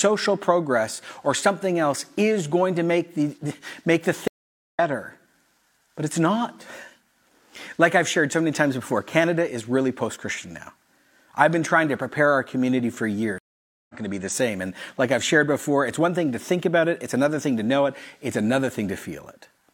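A speech clip with two stream reconnects: the connection dropped and a fresh decoder restarted mid-stream, leaving silences at 4.28–4.79 s and 13.38–13.95 s, each resuming a fraction of a second later.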